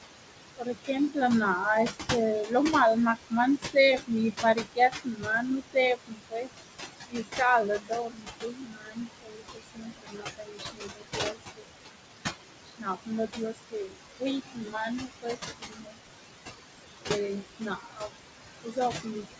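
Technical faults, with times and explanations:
Throughout, noise suppressor artifacts: the suppressor pulls down each band it judges to be steady noise by about 19 dB, frame by frame. Against room noise sitting only about 6 dB under the speech, that cut is large, so the background drops away in gaps and swells back under speech. Above this, nothing reaches past 8 kHz, which fits the G.722 call codec's band limit.
0.27–1.22 s, 1.59–2.12 s, 2.45–2.74 s, 3.15–7.4 s, 7.78–11.64 s, 12.66–15.98 s, 16.93–18.11 s and 18.63 s to the end, speech cut by the noise suppressor: with speech barely above the noise floor, the suppressor mistakes soft parts of it for noise and turns them down, by about 11 to 22 dB at the deepest points. The short early spans lose a fraction of a second each; the long middle spans lose around two to three seconds, so consonants and endings sound swallowed or faint.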